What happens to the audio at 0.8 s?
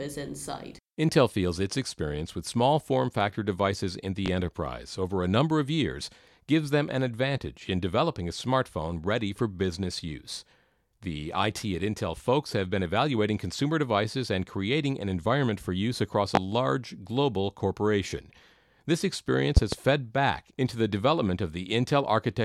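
Nothing goes wrong at 0.8 s; the speech runs on intact through that moment, with no dropout, click or distortion.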